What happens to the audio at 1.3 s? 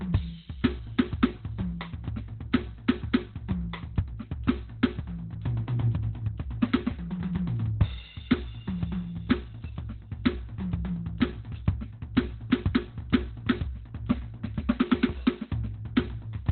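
At 1.3 s, as throughout the clip, the music shows heavy Opus compression, likely at a very low bitrate that pushed the encoder into its narrowband speech mode. Nothing survives above 4.2 kHz, so the music sounds muffled and hoarse.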